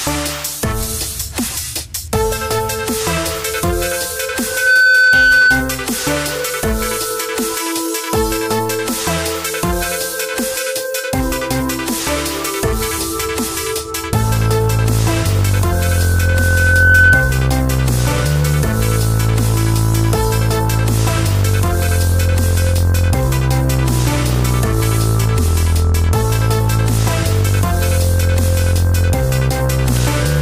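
Loudspeaker feedback squeal at 4.43–5.78 s and 15.72–17.58 s: a 1.5 kHz tone swells from nothing as the mic-speaker loop runs away, quickly and slightly above the sound the first time, slowly and well above it the second. That growth sets it apart from a steady interfering whistle.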